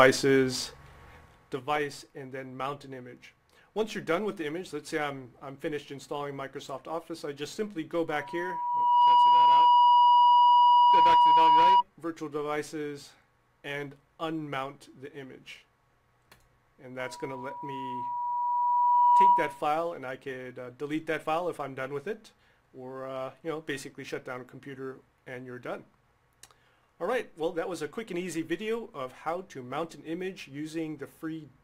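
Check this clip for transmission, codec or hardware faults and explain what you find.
Two kinds of fault stand out: a stepped gain change and two bursts of loudspeaker feedback.

Zipper noise, 1.16 to 1.69 s: the level drops by about 15 dB in unsmoothed 1 dB steps, roughly 30 a second. Each step clicks, giving a fast zipping texture. The waveform envelope shows a staircase, and the spectrogram shows faint broadband vertical ticks.

Loudspeaker feedback squeal, 8.08 to 11.83 s and 16.99 to 19.64 s: a microphone picks up its own loudspeaker, and loop gain above one at 969 Hz makes that tone grow. It swells over roughly one second, then two, to about 15 dB above the sound. The spectrogram shows a bright horizontal line at 969 Hz, and the waveform shows a swelling sinusoidal envelope.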